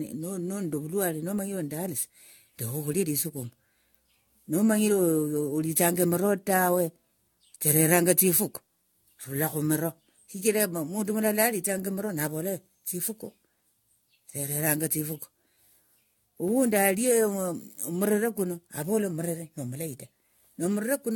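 Repeated lossy re-encoding, likely around seven passes through an AAC-type codec at a rate near 96 kbit/s, has produced generation loss across the whole speech recording. Each decode and re-encode quantised the signal on a shifted frame grid, so the errors compounded. The result is a swirly, hollow, smeared texture beyond what a single encode at that rate would give, with consonant attacks blurred and nothing above 17 kHz.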